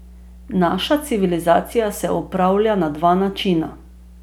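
Mains hum runs from start to finish under the speech: a steady low tone at 60 Hz with some low harmonics above it. It sits roughly 25 dB below the speech, quiet enough to stay beneath the voice. The power line has leaked into the signal path, most plausibly through a ground loop between connected equipment or through a nearby transformer.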